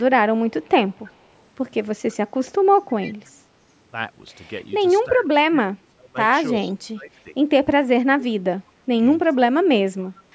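Echo leak at 0.00 to 1.25 s, 2.11 to 2.16 s and 3.01 to 3.13 s: a faint copy of the speech returns 323 ms late, roughly 20 to 35 dB down, likely left by a loudspeaker-side echo canceller. Speech suppressed in double talk from 5.07 to 7.35 s: the voice dips by up to about 25 dB for about two seconds in pieces, likely because the canceller muted the talker along with the echo. A brief echo leak also surfaces at 6.56 to 6.70 s. The same suppression returns from 8.02 to 10.34 s for about one and a half seconds, with another faint 323 ms echo at 10.05 to 10.21 s.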